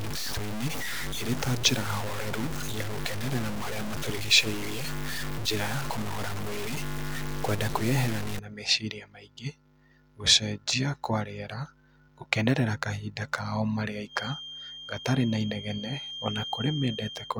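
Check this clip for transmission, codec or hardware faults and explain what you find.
Two faults are audible in this speech clip.

From 0.0 to 8.39 s there is low bit depth without dither. The speech is grainy and gritty, with the distortion tracking the voice and quiet stretches sputtering or dropping out. This likely comes from truncation to about 5 bits. On a waveform, the amplitudes sit on coarse steps. On a spectrogram, broadband hash follows each syllable and is nearly as strong as the speech itself.

From 14.05 s to the end there is a feedback whistle. A thin, steady 3.2 kHz tone sits well below the speech and swells and fades slowly in level. The likely cause is a loudspeaker-to-microphone loop held just short of runaway. A spectrogram shows a single persistent horizontal line at 3.2 kHz.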